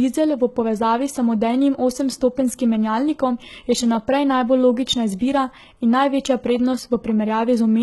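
From start to finish the speech carries heavy HE-AAC compression damage. The treble sounds synthetic. Nothing reaches above about 11.8 kHz. The upper band is likely rebuilt by spectral band replication, copied up from lower bands and shaped only coarsely. Its harmonics do not line up with the real ones below. S sounds come out gritty, metallic and lispy. The heavy damage fits a bitrate around 16 kbps.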